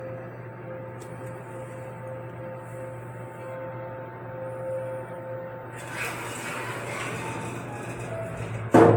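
The recording of everyday sounds carries generation loss across its full length, with a swirly, hollow texture, smeared attacks and nothing above 18.6 kHz. The likely cause is repeated lossy encoding, roughly four passes through AAC-LC, with a character that fits 96 kbit/s. Each re-encode quantises again on a shifted frame grid, so noise and spectral holes stack up and sound worse than a single pass at that bitrate would.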